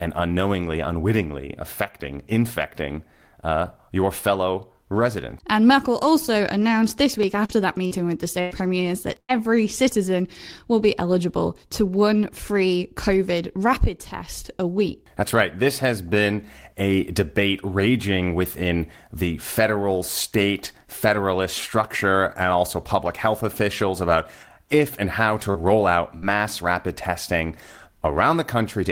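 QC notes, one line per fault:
7.45–9.31 s, repeated packet loss (robotic sound): four gaps in under two seconds, the longest about 99 ms, roughly 280 ms missing in all. Each hole gets patched by stretching the last bit of sound, so the stretch turns choppy and robotic, with pieces gone.
26.18 s, short concealed packet loss: about 40 ms never arrived in time, and the receiver bridged it by carrying the previous sound forward, then blending back in. You hear a quick smear or wobble, and a brief consonant there could drop out.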